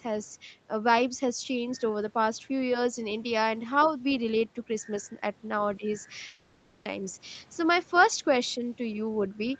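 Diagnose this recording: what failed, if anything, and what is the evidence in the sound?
Call processing, echo cancellation: a brief scrap of other side's voice leaking through appears from 3.83 to 3.91 s, about 20 dB below the main speech. It is likely residual loudspeaker echo the canceller failed to remove. On a spectrogram it shows as a faint, separate harmonic stack under the main talker.

Call processing again: speech suppressed in double talk shows twice. At 5.77 to 5.85 s the level dips by roughly 10 dB, and at 8.57 to 8.64 s by around 5 dB, each lasting about 70 ms. The likely cause is the canceller ducking its own talker while the far end spoke. The waveform shows short notches in the envelope.

Network: a long network dropout runs from 6.27 to 6.87 s, about 0.6 s of audio that never arrived. The receiver's concealment fills the whole gap, with no true silence, stretching the last sound into a decaying buzz before speech resumes further on. 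A likely lost burst of packets caused it. The spectrogram shows smeared, repeating texture fading in energy across the gap, not normal speech structure.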